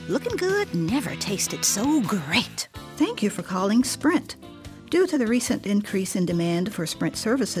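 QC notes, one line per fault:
No faults found in this clip.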